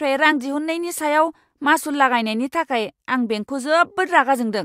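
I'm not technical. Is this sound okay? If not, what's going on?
No. At 0.31 s there is one instance of compressed frames skipped. A single block of the compressed speech, about one frame or roughly 20 milliseconds of audio, never gets played. It was either missing from the file or rejected by the decoder as damaged, so playback jumps straight past it, and a sliver of the speech is simply gone.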